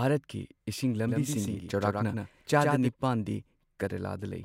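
A doubled audio track from 1.08 to 2.88 s, likely from a second, slower capture path, adds a dry copy about a tenth of a second late and somewhat quieter, switching in and out abruptly.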